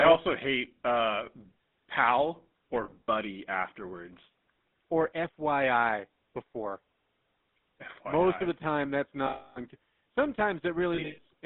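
Throughout the speech there is a buzzy, gravelly roughness, with nothing below about 200 Hz or above 3.7 kHz. This is the GSM full-rate codec, and the plainly audible damage fits its 13 kbps coding. It rebuilds the voice from a vocal-tract model excited by sparse, regularly spaced pulses, so the fine texture of the voice is replaced by a coarse, rasping buzz inside a narrow telephone band.

From 2.84 to 3.09 s, between "pal or" and "afterwards or", the sound turns briefly into a rough, metallic ring in short bursts. These are lost GSM frames: about 140 ms of audio is missing, spread over roughly a quarter second, with the longest gap around 40 ms. The decoder fills each gap by repeating the last good frame. From 9.26 to 9.60 s, after "of the time that's", a single 300 ms loss rings metallically. From 10.94 to 11.19 s, 200 ms of frames drop out in scattered runs, the longest about a tenth of a second, giving a similar held, ringing smear.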